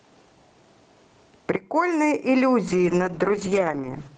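Gain pumping runs through the whole speech clip, with a swing of around 15 dB. This is likely a fast limiter or compressor fighting a preamp gain set far too high, which leaves the speech squashed and flat in dynamics.

A sudden gain jump hits at 1.56 s, when speech and background noise drop together by about 12 dB in a single step, then return at 2.29 s. The abrupt, unramped level change points to a digital gain setting or bit shift applied instantly.

A call bitrate drop starts at 2.69 s and lasts until 4.15 s, with the worst stretch lasting about 1.4 s. The Opus encoder was starved of bits after the bandwidth estimate fell, consistent with a fall from about 32 to 9 kbps. The top end narrows from 12 kHz to 8 kHz, and the speech turns muffled and watery.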